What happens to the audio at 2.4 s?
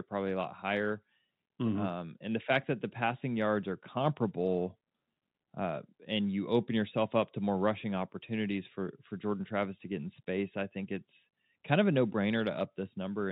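Nothing goes wrong at 2.4 s; the speech passes through that moment intact, with only the usual narrow telephone band of G.711 coding to be heard.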